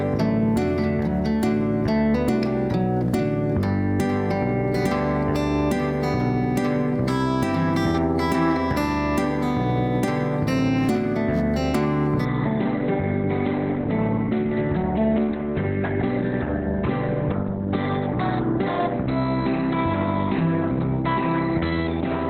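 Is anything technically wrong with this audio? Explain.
Yes. At 12.25 s the audio drops to an adaptive stream at a lower bitrate and stays there to the end at 22.30 s. The player switched to a lower-quality rendition of the same stream, most likely because the connection slowed, and the switch is abrupt with no gap. Past that point nothing is left above about 4.3 kHz, so the sound turns dull and band-limited, and coding artefacts rise. This is consistent with a step from a mid-rate Opus stream down to a very low one.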